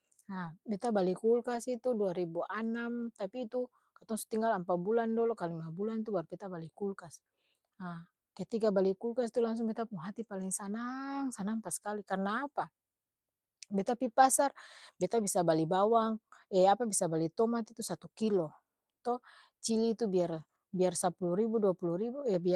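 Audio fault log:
0.45 s, 1.55 s, 10.41–10.43 s, 11.67–11.69 s (just before "karna apa") and 15.17–15.23 s: lost packet rebuilt from error correction. Each drop was patched from a low-bitrate copy carried in the next packet, so there's no gap, just a brief rough, noisy 20 ms stretch for the first four. The last patch runs 40 ms, which suggests two packets went missing.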